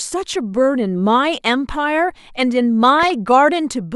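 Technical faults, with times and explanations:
2.99–3.10 s, DAB burbling: for about a tenth of a second the speech gets burbling, with short blips of noise. That's bit errors from weak reception slipping past the error correction into the MP2 data, so corrupted samples put short noise blips into single sub-bands and corrupted scale factors make sub-bands jump in level for up to a frame. Roughly seven frames are damaged, and the error rate points to a small fraction of a percent.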